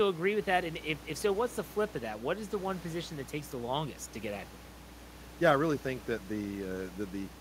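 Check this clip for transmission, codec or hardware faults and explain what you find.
One hardware fault is audible. Mains hum runs from 0.38 s to the end: a ground loop or nearby transformer couples the 60 Hz supply in, giving a steady low drone roughly 10 dB under the speech.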